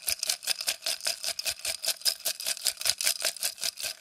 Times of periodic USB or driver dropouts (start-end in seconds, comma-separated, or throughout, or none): none